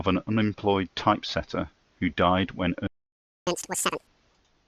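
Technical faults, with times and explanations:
2.87 to 3.47 s, playback stall: right after "typesetter who died when" the speech just stops dead for about 0.6 s, then picks up from where it left off. That gap is most likely the player running dry on data or its thread getting blocked.
3.47 to 4.07 s, catch-up at higher speed: straight after the gap the speech plays back at double speed, pitched up around ten semitones, so it sounds chipmunky until it drops to normal. The player is resampling its backlog to make up the lost time.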